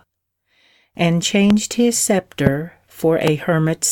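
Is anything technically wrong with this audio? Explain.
Yes, there are three loud pops, at 1.50–1.53, 2.47–2.49 and 3.27–3.30 s. Each is a single sharp click roughly 15 dB above the speech, most likely a voltage spike from a switch or static.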